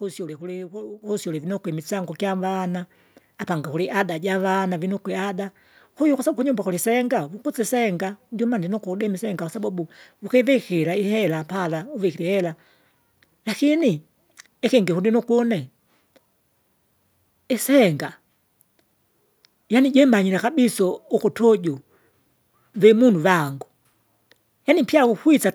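A speech recording with one fault: the microphone volume stepped up. At 1.02 s the level jumps by about 8 dB in a single step. The speech and the background noise rise together, so the change comes after the microphone, not from anything in the room. This happens when call software decides the input is too quiet and raises the device's input gain at once. It makes no gradual fade. The rest of the clip stays at the higher level.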